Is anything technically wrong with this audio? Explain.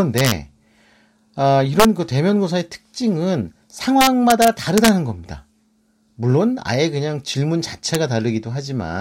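Yes. An integer overflow runs through this speech: somewhere in the gain or mixing stage the samples were allowed to exceed the largest representable value, about 1 to 2 dB too hot, and instead of being limited they wrapped to the opposite extreme. Each overshooting peak flips across the full range, so loud syllables break into violent cracks far harsher than clipping, at 0.18–0.31 s, 1.80–1.85 s, a longer stretch from 4.01 to 4.89 s, and a single snap at 7.95 s.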